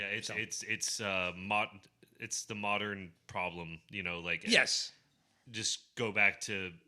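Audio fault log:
1.46 s, corrupt frame decoded: just after "so it's it's uh", flipped bits in a few compressed frames went through the decoder unchecked, so misread codes and gains placed energy at wrong frequencies, heard as a faint blip peaking around -55 dBFS.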